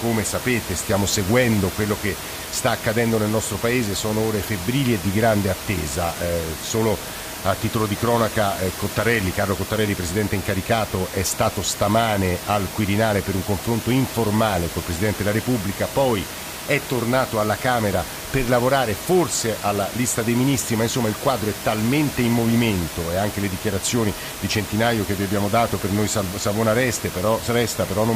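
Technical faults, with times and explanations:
No technical faults are present in the speech; the room's background noise sits about 10 dB below the speech level and belongs to the original recording.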